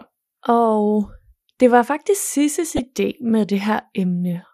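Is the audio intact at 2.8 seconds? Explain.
No. Right after "det var faktisk", from 2.70 to 2.83 s, there's a short burst of DAB burbling. Bit errors in the received stream got past error correction and landed in the MP2 audio data, so corrupted samples put short blips of noise into single sub-bands and corrupted scale factors make sub-bands jump in level for up to a frame. Only a small fraction of a percent of the bits are wrong, but it's enough to hit 9 frames. You hear it as burbling laid over the speech.

Under that, the speech sounds dull and gurgly and granular, with the top end thinning out and flickering. That's MP2 compression, and the damage is plainly audible. The likely cause is an MP2 encode at around 80 kbps, too few bits for the 32 sub-bands. The encoder switches the upper bands on and off and quantises the rest coarsely.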